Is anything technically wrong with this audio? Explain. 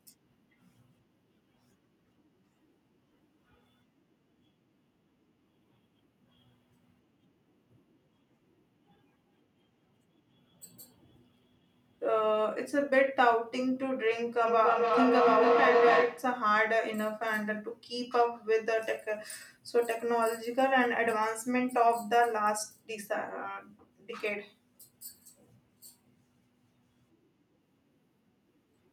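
Yes, there is a feedback howl from 14.47 to 16.44 s. Two devices in one room seem to be on the same call, so each trip from microphone to loudspeaker and back adds level. The repeats grow, narrowing to a tone around 500 Hz that pulses about every third of a second and peaks about 3 dB above the speech. A spectrogram shows a bright horizontal band near 500 Hz, and the waveform swells in rhythmic bursts until the loop breaks.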